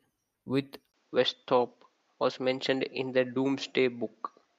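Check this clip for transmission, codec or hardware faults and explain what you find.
One fault is present: an input switched to a poorer device, from 0.92 s to the end. At 0.92 s the sound drops out for about 20 ms, and from then on the band stops near 7.6 kHz, so the speech turns duller and loses its airy top. A new, quiet background noise appears, roughly 45 dB under the speech, while the loudness stays about the same. The likely cause is the system moving its capture to a narrower-band microphone or headset profile.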